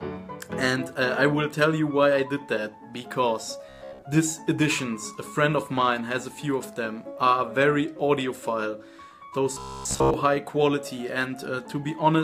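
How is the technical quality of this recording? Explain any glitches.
The recording has two short stretches of robotic sound from repeated short buffers, at 3.69 to 4.05 s and again at 9.54 to 10.14 s. In both, the sound collapses into a stiff, metallic buzz pitched at 66.7 Hz that loosely tracks the underlying audio. That pitch fits a loop about 15 ms long, so the likely cause is late-arriving audio: the system keeps replaying its last short chunk, covering most of each stretch, while the real material gets skipped.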